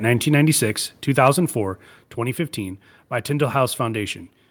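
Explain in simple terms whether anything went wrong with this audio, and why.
Twice the whole sound, speech and background together, suddenly gets quieter, at 1.02 and again at 2.04 seconds. That is a microphone volume stepped down, likely the call software lowering the input level. Unlike a speaker moving away, the drop is instant and stays.

Between 1.26 and 1.28 seconds a loud moment sounds harsh and crackly. That is microphone overload, likely the input set too high so the peaks got chopped off. Unlike the volume steps, nothing gets quieter; the sound briefly turns rough instead.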